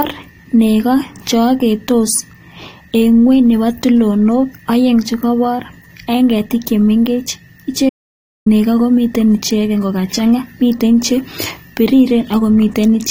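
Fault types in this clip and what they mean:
Audio dropout to silence: the input feed was likely lost for a moment while the recording carried on writing silence, so the speech cuts out abruptly at 7.89 s into dead silence with no room tone for about 0.57 s, resuming at 8.46 s on "nego komiten ichegen kogachang'a".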